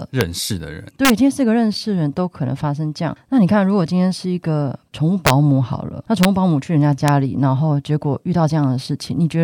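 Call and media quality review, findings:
Integer overflow in gain or mixing stage: loud speech peaks exceed integer range and wrap to opposite sign instead of limiting. Violent cracks at 0.21 s, 1.05–1.10 s, 5.27–5.30 s, 6.23 s and 7.08 s, overdrive about 0 to 2 dB. Harsher than clipping.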